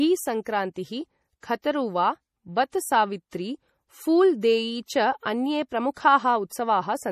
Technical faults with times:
0.00-7.12 MP3 compression

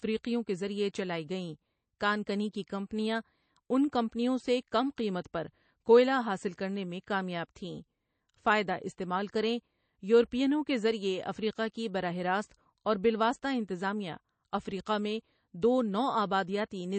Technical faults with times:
0.00-16.98 MP3 compression

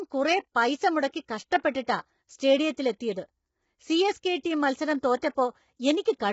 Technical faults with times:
0.00-6.32 low-delay AAC compression

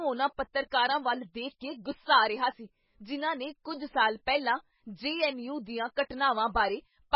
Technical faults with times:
0.00-7.15 MP3 compression

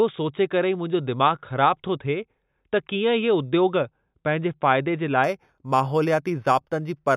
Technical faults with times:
5.24-7.17 imaging from linear upsampling

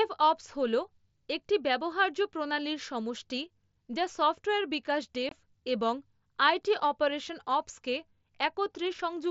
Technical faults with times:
5.29-5.32 unconcealed Bluetooth headset packet loss

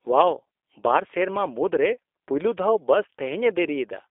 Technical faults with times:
0.00-4.10 G.729 codec

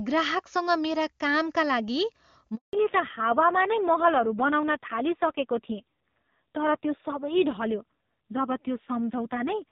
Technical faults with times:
2.55-2.73 handover gap
2.73-9.72 fallback to narrowband

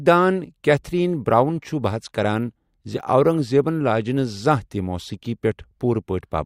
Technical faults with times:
none

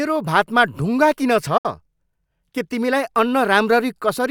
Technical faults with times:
1.57-1.65 digital broadcast dropout

